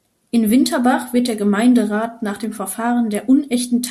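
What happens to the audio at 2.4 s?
At 2.44 s the speech is hit by a single bit error spike. It lasts one sample. One bit in the digital data has flipped, so that sample's value jumps by a power of two and then snaps straight back. The spike peaks at about -14 dBFS. It is heard as one sharp tick. Its energy is spread across the whole spectrum and bears no relation to the surrounding speech.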